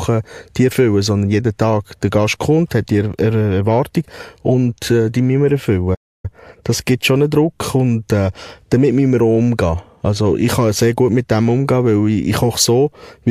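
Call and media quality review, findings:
Playback stall, 5.94–6.25 s, right after "äh die müssen wir": player likely starved of buffered data or its thread blocked. Output drops to silence for 293 ms mid-speech, then resumes, leaving an abrupt gap.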